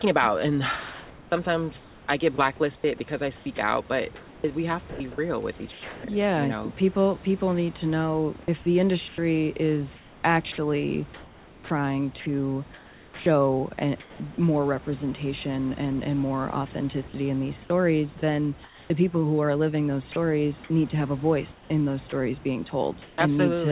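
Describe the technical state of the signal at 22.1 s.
Comfort noise in place of the background runs from 21.52 to 22.12 s: the room's real background gives way to steady, featureless synthetic noise, likely from discontinuous transmission during a pause. The sound dropped by the voice detector falls at 22.10 to 22.12 s, where about 10 ms of sound is lost to that same noise, likely because the detector took it for background.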